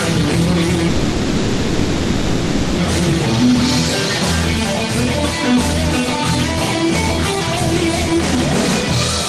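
At 0.87 s the sound stops moving forward and turns into a sustained buzzy hiss, a smeared continuation of the last instant that fades without ever dropping to silence, until normal sound resumes at 2.80 s. This is a call audio freeze, likely from packets being held up in transit so the jitter buffer ran dry. The receiver filled about 1.9 s with that synthetic tail, then picked up where it left off, so nothing is lost but everything afterwards arrives 1.9 s later.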